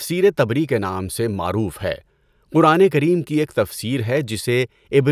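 No technical faults are audible.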